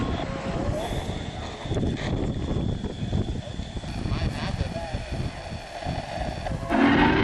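From 3.88 s to the end at 7.24 s, the audio carries periodic clock jitter. The converter clock is being modulated at around 1 kHz, putting sidebands either side of every component, strongest on high-frequency content. The result is a rough, metallic edge that disappears in silence.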